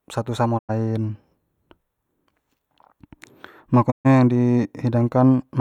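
Speech, with two digital broadcast dropouts at 0.57–0.71 s and 3.90–4.07 s. The receiver mutes after corrupt frames, fading out over 20 ms, and the audio in between is gone.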